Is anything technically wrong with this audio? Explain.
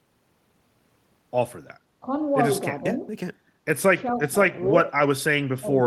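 Yes. The speech dips in level four times: briefly at 2.01 to 2.06 s by about 10 dB, gently at 2.8 to 2.99 s by about 5 dB, then deeper at 4.12 to 4.38 s (about 15 dB) and 5.59 to 5.73 s (about 20 dB). This is likely speech suppressed in double talk, where the echo canceller, unable to separate this talker from the far side's echo while both spoke, turned everything down.

At 4.08 to 4.14 s a faint, short scrap of delayed voice surfaces, about 25 dB below the speech and trailing it by 414 ms. This is likely an echo leak: a loudspeaker's output reached the far microphone, and its echo canceller let a remnant back.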